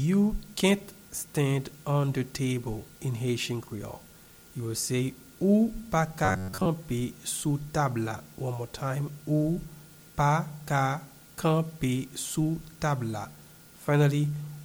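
Robotic sound from repeated short buffers at 6.25 to 6.67 s: a metallic 93.8 Hz buzz, likely from a roughly 10.7 ms block looping while most new audio is skipped.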